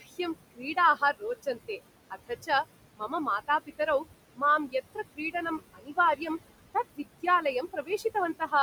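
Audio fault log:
Throughout, computer activity noise: there's a buzzy, chirpy layer pulsing at around 100 Hz, roughly 25 dB under the speech. It rides on the computer's load shifting the shared audio ground, so it comes and goes with the machine rather than with the talking.
Throughout, noise suppressor artifacts: the suppressor pulls the steady background down by about 20 dB frame by frame. The room noise, sitting about 13 dB below the speech, drops away in gaps and swells back under the talking.
0.55–1.79 s, 2.1–2.49 s, 2.97–3.8 s, 4.36–6.22 s and 7.62–8.53 s, speech cut by the noise suppressor: in each stretch the suppressor mistook quieter bits of speech for noise and ducked them by about 14 to 20 dB. The loss adds up to about 150 to 500 milliseconds per stretch, so soft consonants and word endings come out swallowed and faint.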